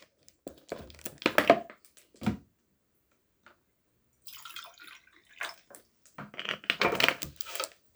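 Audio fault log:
Nothing stood out on listening; no fault could be heard anywhere in the recording.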